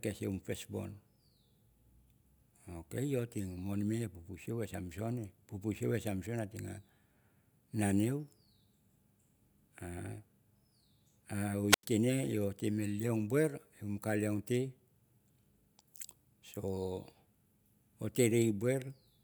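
At 11.69 s the speech suffers a wireless microphone squelch dropout lasting until 11.85 s. The radio link from an analogue FM microphone weakens. As the signal fades, hiss and static briefly rise. The receiver's squelch then cuts the output entirely. This leaves a hole of near silence about 91 ms long. The speech returns at 11.85 s once the signal recovers enough for the receiver to unmute.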